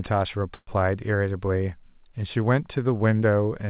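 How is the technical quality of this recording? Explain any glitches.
The recording carries one glitch, a call audio freeze, over a narrowband telephone-style band. Nothing sounds above 4 kHz, which fits a G.711 codec at 64 kbps.

From 0.54 to 0.71 s the speech stalls. The last sound is stretched into a fading buzz for roughly 130 ms. About 50 ms of silence follows. Then speech resumes exactly where it stopped. Nothing is lost. Everything after is simply pushed later. The likely cause is delayed packets draining the jitter buffer, so the receiver filled the wait.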